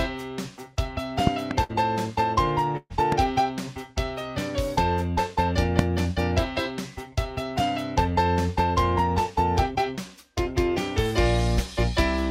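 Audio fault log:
1.27–1.53 s, 3.12–3.14 s and 5.79–5.81 s: loud pop. Two sharp pops in the first span, then one each at the later times, peaking about 20 dB (about 15 dB at 3.12 s) above the sound, which carries on underneath unbroken. This is likely a voltage pulse from a switch, plug or static discharge.
1.63–1.72 s and 2.77–2.93 s: burst of packet loss. The last sound is stretched and faded for about 56 ms, then about 128 ms with a brief silence of about 30 ms. The sound resumes with about 60 ms and 120 ms missing, a skip in the timeline rather than a click over it.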